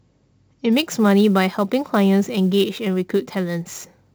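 From 0.72 s to the end, the converter's sample clock wanders by around ten microseconds, causing sample clock jitter. Samples land early or late, so steep, loud or bright passages of speech gain a hiss-like roughness roughly 25 dB down, disappearing in pauses.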